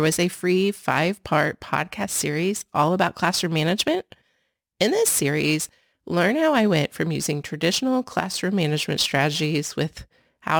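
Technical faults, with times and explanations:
Throughout, crude rate conversion: the speech carries a gritty, inharmonic fizz that rides on louder and brighter sounds, sitting roughly 20 dB below the speech itself. The pattern fits a step up from 44.1 kHz to 48 kHz done by simply repeating the nearest sample rather than filtering. The uneven repeats recur on a cycle set by the two rates, adding tones unrelated to the speech's own pitch and harmonics.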